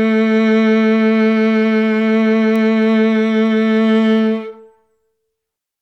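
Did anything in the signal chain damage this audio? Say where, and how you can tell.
Yes. Two isolated, needle-sharp ticks cut through the music at 2.56 s and 4.18 s. The first is loud, peaking at about -10 dBFS, and the second quieter, at about -28 dBFS. Each lasts a single sample and has no relation to the musical waveform around it. These are bit error spikes from the storage or digital-link stage: a flipped bit throws one sample's value off by a power of two before the signal instantly returns.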